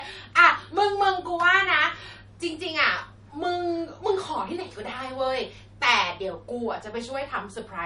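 From start to finish the speech has a hard ceiling at 10.6 kHz, with nothing above it, and the upper detail has a watery, swirling quality in which s sounds chirp metallically and attacks blur. This is likely MP3 compression at a starved bitrate, consistent with roughly 40 kbps. Weak frequency lines drop in and out from frame to frame. That flickering sets it apart from a simple low-pass filter, which would dull the treble without the swirl.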